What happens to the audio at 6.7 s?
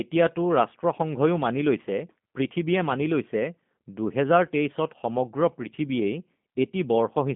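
At 6.7 s the speech sounds narrow, slightly rough and synthetic, with nothing above 3.5 kHz and little below 150 Hz, and that character holds from start to end rather than appearing at that moment. It is G.729 codec damage, plainly audible here. At 8 kbit/s the codec discards the waveform and rebuilds the speech from a vocal tract filter, a pitch predictor and a few pulses per frame, which leaves the buzzy, artificial edge.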